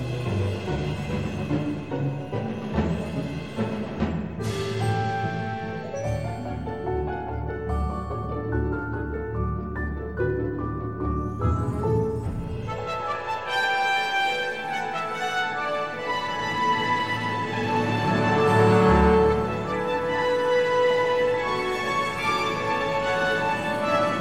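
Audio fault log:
No faults found across the clip; nothing to log.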